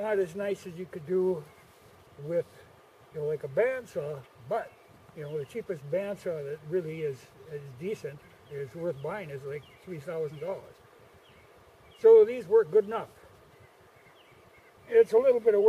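Nothing in the audio stood out as a technical problem on listening.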